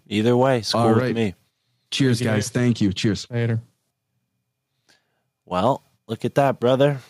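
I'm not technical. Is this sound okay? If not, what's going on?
Yes, the recording's technical signal shows no faults anywhere in the clip.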